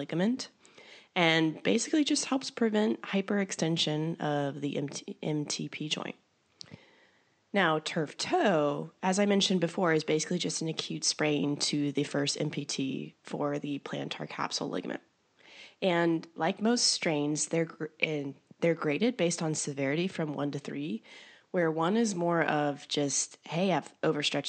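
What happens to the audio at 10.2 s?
Nothing goes wrong at 10.2 s: the speech carries on intact, with only the room's own background noise sitting about 43 dB beneath it.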